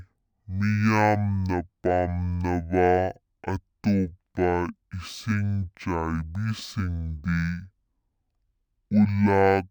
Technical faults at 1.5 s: stereo read as mono

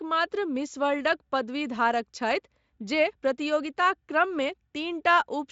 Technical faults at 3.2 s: none

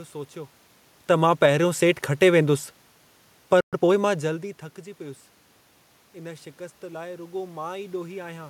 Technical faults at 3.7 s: automatic gain falling; playback stall; time-compressed catch-up

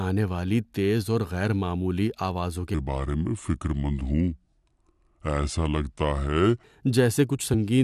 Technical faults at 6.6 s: section at the wrong speed

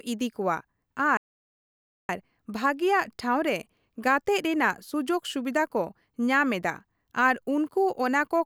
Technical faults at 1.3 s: playback stall

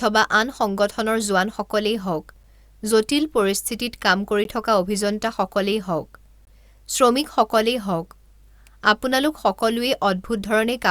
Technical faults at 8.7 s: none

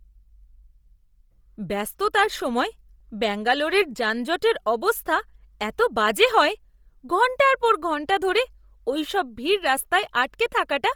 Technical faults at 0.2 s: Bluetooth LC3 compression

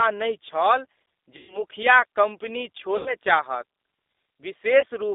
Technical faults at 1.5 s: G.729 codec; VoIP packet loss concealed by the speech codec

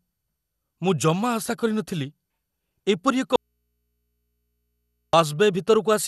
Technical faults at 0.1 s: MP2 compression

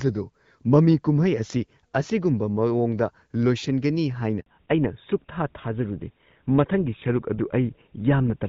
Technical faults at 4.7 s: fallback to narrowband

